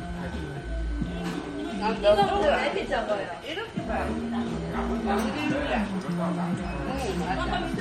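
From start to finish the sound carries plainly audible MP3 compression, likely from a low-bitrate encode, which fits something near 45 kbps. Nothing is left above 16 kHz, and weak detail flickers between frames into a watery swirl with metallic chirps, unlike the steady dullness of plain low-pass filtering.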